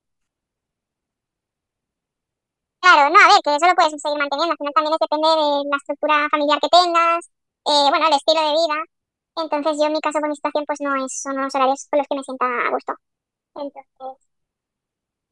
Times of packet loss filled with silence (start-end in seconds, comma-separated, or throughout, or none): none